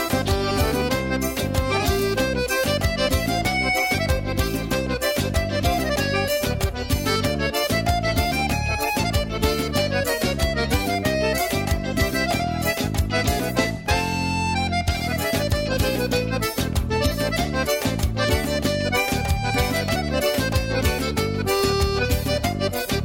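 From 10.09 s to 10.73 s the audio slows by about 5.6% and drops in pitch by close to a semitone (roughly 100 cents), then snaps back to its original rate and pitch. This is a drift correction step: the sound is the abrupt rate change itself, with speed and pitch moving together. It is likely caused by clock-matching software that briefly altered the playback rate in a single step to rebalance its buffer.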